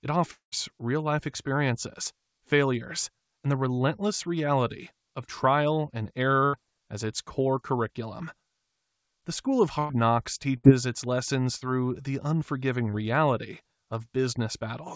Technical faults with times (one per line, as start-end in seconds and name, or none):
0.32-0.54 long network dropout
9.79-9.91 burst of packet loss
10.57-10.65 burst of packet loss
11.57-11.63 short concealed packet loss